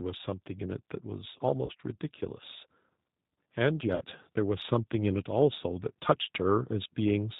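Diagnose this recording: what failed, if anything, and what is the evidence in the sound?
Codec stage: the whole recording carries plainly audible G.729 coding. The speech has a rough, synthetic edge and nothing above 4 kHz, which points to its 8 kbit/s mode.

Network stage: there's VoIP packet loss concealed by the speech codec at 1.66–1.72 s (about 30 ms lost) and 3.95–4.05 s (60 ms). The decoder stretches its last frame into a buzzy tone or coloured noise that fades, fitting one then two lost packets.

Call processing: the automatic gain is rising from 4.69 to 7.35 s, swelling speech and background together by about 5 dB as the level controller slowly pushes gain up.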